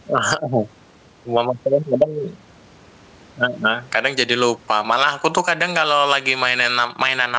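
Speech with gain pumping throughout. The gain swings by around 10 dB, likely from excessive gain driving a fast limiter.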